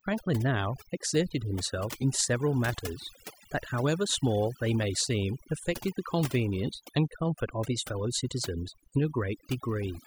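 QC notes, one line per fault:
Throughout: overdone noise removal. The noise reduction on this speech was pushed too hard, so any frequency band sitting near the estimated noise floor is pulled far down or shut off entirely, and the softer parts of the voice get caught along with the noise. The gaps between phrases drop to near silence flecked with twinkling, chirpy specks where isolated bands flicker on and off, while the voice itself is stripped of its quieter detail.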